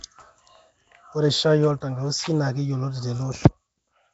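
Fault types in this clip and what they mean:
Nellymoser compression: Speech sounds rough, hissy and underwater, with nothing above 7.7 kHz. Likely Flash's Nellymoser codec near 32 kbps, noise-filling starved bands.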